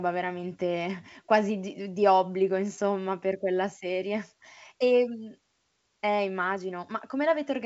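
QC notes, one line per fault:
Nothing stood out on listening; the speech comes through the G.722 wideband telephone coding path at 64 kbit/s, with its top end stopping near 7.7 kHz.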